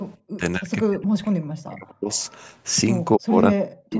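From 0.24 to 2.18 s the speech dips and breaks up, likely speech suppressed in double talk, where an echo canceller treats near-end speech overlapping the far-end sound as echo. Gains fall by about 40 dB across roughly a second and a half, seen as gouged, thinning stretches in the waveform envelope.

Between 2.15 and 2.55 s a faint delayed copy of the voice trails in, likely an echo leak from a loudspeaker path that the canceller did not fully remove. It lags by 248 ms at about 35 dB below the speech, visible on a spectrogram as a weak, displaced repeat of the preceding harmonics.

From 3.17 s to the end, speech suppressed in double talk returns, again likely from the canceller ducking near-end speech during overlap. Roughly 0.7 s is pulled down by as much as about 40 dB, leaving hollowed, fragmented energy bands below the call processing's 8 kHz ceiling.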